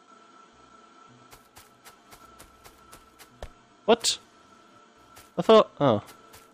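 Hard clipping shows up near the end, from 5.50 to 5.60 s, where the audio drives a stage about 3 dB past what it can pass. The peaks are cut flat, and the sharp corners add high harmonics. The result is a brief crackle on the loudest moments of that tenth of a second.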